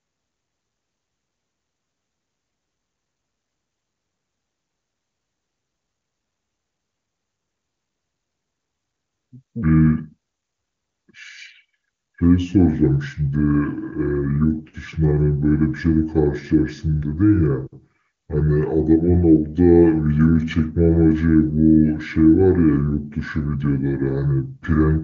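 From 9.63 s to the end, the speech plays as a section at the wrong speed, at 0.676 times the recorded rate, likely from playback against a mismatched clock. It drags and drops roughly seven semitones together, unlike a pure pitch shift, which keeps timing intact.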